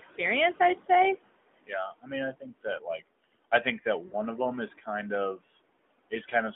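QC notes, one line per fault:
Throughout: noise suppressor artifacts. The room noise, about 16 dB under the speech, drops by roughly 21 dB between phrases and swells back under them, pumping with the speech rather than sitting steady.
4.08–4.15 s: lost AMR speech frames. Between "I think that" and "of them is", about 40 ms of speech, consistent with two lost 20 ms frames, is briefly smeared and dipped, a single localised glitch rather than ongoing warble.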